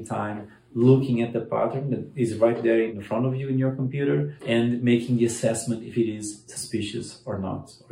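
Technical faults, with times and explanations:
No technical faults can be heard anywhere in the audio. Nothing here needs a time or an explanation.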